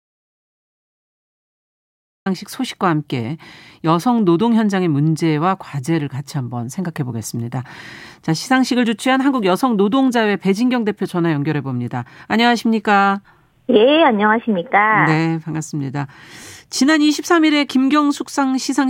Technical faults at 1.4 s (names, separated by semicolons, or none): audio dropout to silence